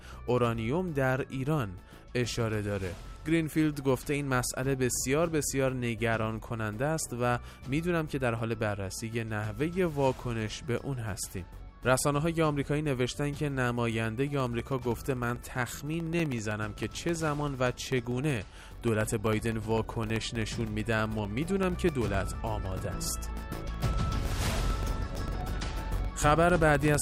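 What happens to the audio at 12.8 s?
Nothing goes wrong at 12.8 s; the audio carries on intact through that moment, with no dropout, click, glitch or other fault.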